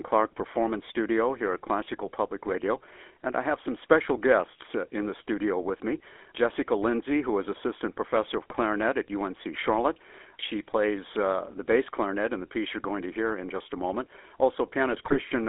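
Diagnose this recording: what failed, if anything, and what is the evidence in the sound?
The codec stage is at fault throughout. The speech carries the buzzy, gravelly roughness of the GSM full-rate codec. The band runs from 300 Hz to 3.5 kHz, and the sound fits the 13 kbps full-rate coder. That coder models the vocal tract and drives it with a coarse, regularly spaced pulse excitation, so the texture turns rasping rather than smeared. Plain band-limiting would only dull the sound, and it wouldn't add this buzz.

At the network or radio-link stage, GSM bit errors break the speech twice, from 8.50 to 8.61 s and from 14.92 to 15.17 s. The second burst is longer and spans eleven corrupted frames. Flipped bits reach the decoder's filter, pitch and gain values, so a frame decodes with a bent spectrum or a sudden level jump. That sounds like squawks and gargling. Packet loss or concealment would leave gaps or repeats instead.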